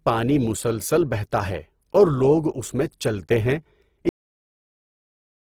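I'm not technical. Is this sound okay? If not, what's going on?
No. Throughout the recording, the speech has a rough, grainy, noisy texture. The likely cause is Opus compression squeezed too hard. With too little data to work with, the encoder fills in detail with noise or copied material instead of the real sound.

At 4.09 s, just after "اس میں چلتے ہیں", there is a cut-off end. The audio stops in the middle of a sound and drops straight into dead silence, with no natural fade, for the rest of the clip. The final stretch of audio was simply never written out.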